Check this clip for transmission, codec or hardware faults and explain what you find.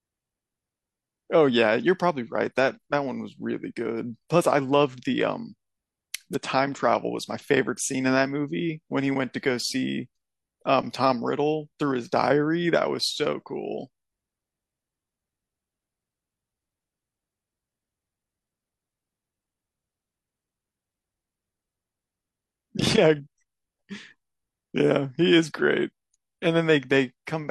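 Nothing in this speech recording points to a transmission, codec or hardware problem, so there's nothing to flag here.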